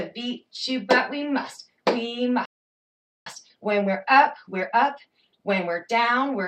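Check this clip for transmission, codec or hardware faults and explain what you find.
Two related playback faults are audible: a stall followed by a catch-up.

Playback stall, 2.45 to 3.26 s: the sound cuts out mid-flow for about 0.81 s, likely because the player ran out of buffered data or its thread was blocked.

Time-compressed catch-up, 3.26 to 6.26 s: to clear the backlog, small pieces are cut and cross-faded, so the audio runs about 1.15 times fast at normal pitch.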